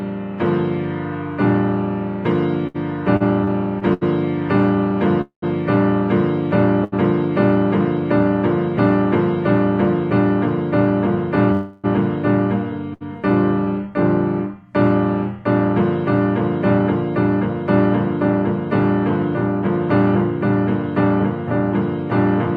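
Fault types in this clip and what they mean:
Repeated stalls (stutter): Packets kept arriving late or more slowly than they were played out, so the jitter buffer emptied five times between 2.67 and 4.03 s. Each time the receiver extended the last sound to cover the wait, about 239 ms in total with the longest gap 78 ms, so roughly a fifth of that stretch is filler. Nothing is lost, but the sound hitches and drags through the passage.
Call audio freeze: The jitter buffer ran dry, likely because packets were held up in transit, and the receiver filled the wait by extending the last sound. At 5.21 to 5.44 s that fill lasts about 210 ms and fades to roughly 100 ms of silence. At 11.52 to 11.86 s it runs about 315 ms without reaching silence. In both, the audio then resumes where it stopped, shifted later by the inserted gap, with nothing missing.
Short stall from a late packet: A single packet failed to arrive on time, briefly emptying the jitter buffer, so the receiver stretched the preceding sound until it showed up and then carried on from the same point. 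This happens at 6.84 to 6.94 s, adding about 78 ms, and at 12.94 to 13.03 s, adding about 70 ms. Nothing is lost. Each shows as a moment held slightly too long with a faint buzzy or dipping quality.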